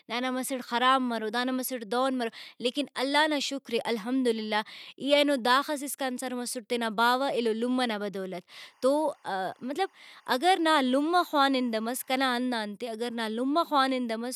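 A speech recording with timecode bleed from 8.61 to 12.26 s: linear timecode at 24 frames per second leaks in from an adjacent track or cable, producing a faint chirping warble that alternates between roughly 1 and 2 kHz, sitting around 35 dB below the speech.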